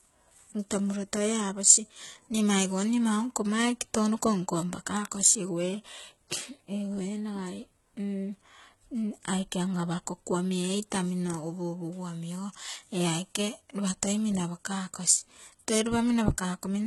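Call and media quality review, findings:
HE-AAC compression, whole clip. Sibilants come out gritty and lispy, with treble that sounds synthetic and doesn't sit right on top of the lows. Hard ceiling, nothing above 11.8 kHz. Likely HE-AAC band replication rebuilding the highs from copied lower bands, so harmonics don't line up across the crossover. Heavy damage, fits a very low rate around 16 kbps.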